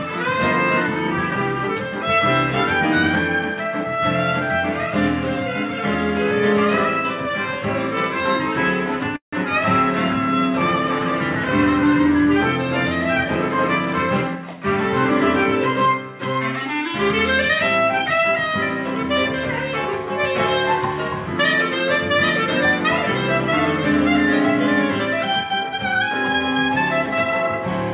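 A call audio freeze runs from 9.16 to 9.35 s, likely caused by packets arriving late enough that the jitter buffer ran dry. The receiver extends the last sound briefly, then falls silent for about 120 ms. When the stream returns, it picks up exactly where it stopped, so nothing is lost. Instead, roughly 165 ms of pause is inserted, and everything after it plays that much later.

A jitter buffer speed-up follows from 13.25 to 14.58 s. Having built up surplus audio, the buffer trims it by cutting out short pitch-period-length slices one after another, around 150 ms in total. That segment plays at about 111% speed with its pitch unchanged, so it sounds rushed. The whole clip is also band-limited with nothing above 4 kHz, consistent with a narrowband G.711 mu-law call path.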